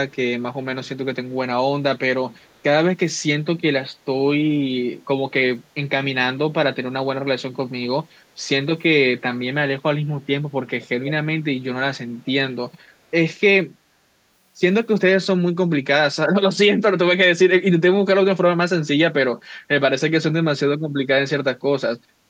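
At 11.05 to 11.11 s, a brief echo leak returns the speech about 487 ms late, roughly 15 dB down. A fainter scrap follows at 12.27 to 12.32 s, much quieter. A far-end echo canceller likely let loudspeaker pickup through.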